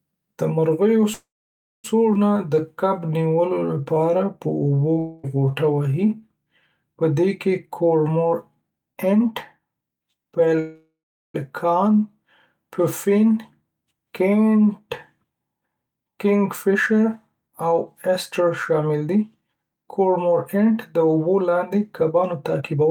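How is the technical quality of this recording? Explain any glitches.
The speech has several network-delivery faults: two freezes, a jump forward, a stretch of slowed playback with a dropout inside it, and two stretches of rushed playback.

Call audio freeze, 1.13 to 1.86 s and 10.59 to 11.36 s: The first comes just after "د مرغیو". In each, the last sound hangs on as a fading buzz, then silence, about 0.57 s in the first and 0.37 s in the second. Speech resumes where it stopped, so nothing is lost. The likely cause is packets held up in transit, which let the jitter buffer run dry.

Skip ahead, 2.14 to 2.17 s: Right after "د مرغیو څو", the speech lurches forward almost without a gap, with roughly 0.4 s missing and the two sides butted together. That audio was dropped, in transit or by the buffer, while later packets were already queued.

Jitter buffer slow-down, 2.37 to 6.22 s: Speech drags at 89% speed with unchanged pitch, and sounds are stretched. 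The receiver repeated single pitch periods, adding 446 ms, to build up a reserve in a buffer that was running low or had just raised its target delay.

Long network dropout, 4.99 to 5.25 s: Inside the slowed stretch, the sound smears into a brief buzzy fill lasting about a quarter second, with no silence. Speech then picks up 240 ms further on. The likely cause is a run of packets that never arrived.

Jitter buffer speed-up, 7.76 to 10.54 s and 15.17 s to the end: The first follows "پدې کې". Speech hurries at 111% and then 110% speed, at the same pitch. Roughly 0.3 s and 0.7 s were trimmed away in small pitch-period pieces to drain an overfull buffer.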